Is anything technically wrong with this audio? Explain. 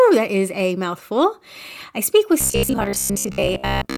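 Yes. From 2.41 s to the end, the speech becomes a rigid metallic buzz near 66.8 Hz, robotic sound from repeated short buffers, likely a 15 ms chunk replayed in place of most incoming audio.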